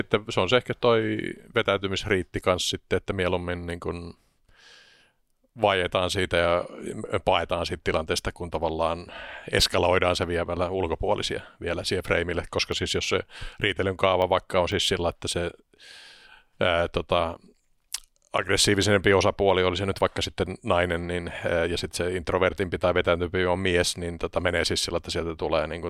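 Periodic USB or driver dropouts run from 12.72 to 15.72 s, after "vielä siihen freimille koska": every 0.5 s a sub-millisecond gap of silence clicks through the speech.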